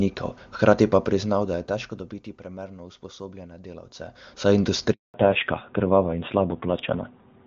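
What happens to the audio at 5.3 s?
A fallback to narrowband begins at 5.14 s and runs to the end of the clip at 7.47 s, so 5.3 s falls just inside it. The speech drops from HD Voice wideband coding (AMR-WB) to an older narrowband codec, and everything above 4 kHz disappears. The voice turns duller and rougher, losing the airy sibilance the wideband section carried. The added grit fits a low-rate AMR-NB mode of around 7.4 kbit/s.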